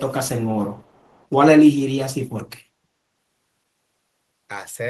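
From 0.79 to 1.23 s there's an echo leak, a very faint copy of the speech trailing about 395 ms behind, likely the far end's echo canceller letting some through.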